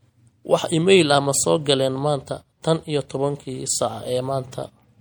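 Throughout the speech there's plainly audible MP3 compression, likely around 64 kbps: bit-starved frequency lines flicker frame to frame, giving a watery, swirly texture.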